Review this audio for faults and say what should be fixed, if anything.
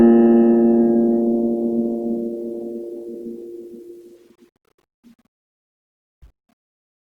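Opus compression, likely at a rate near 24 kbps in its music mode, roughens the music throughout: short of bits, the encoder fills bands with folded or noise content, so tones turn grainy. On a spectrogram, content still reaches about 20.1 kHz, but harmonics smear into noisy texture instead of clean lines. Encode at a higher bitrate, or work from a lossless master.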